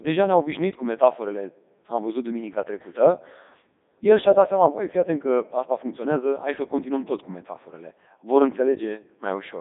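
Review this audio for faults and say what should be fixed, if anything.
Throughout, the speech carries heavy Codec 2 vocoder damage. The speech comes out robotic and buzzy because it is resynthesised from sine waves driven by pitch, voicing and envelope. Its character fits the 3.2 kbit/s mode. A plain band limit wouldn't sound like this. The line band runs from 200 Hz to 3.7 kHz with nothing above 3.8 kHz, but the buzzy, synthetic quality comes from the lost waveform, not from the narrow band. To prevent it, record or deliver over a waveform codec or uncompressed path instead of a digital-radio vocoder link.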